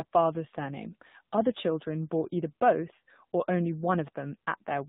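From start to finish the speech carries the AMR narrowband mobile codec sound, and the damage is plainly audible. Nothing above 4 kHz survives, so it's muffled and phone-like. The low bit budget, which fits the 7.4 kbps mode, leaves the voice buzzy and synthetic.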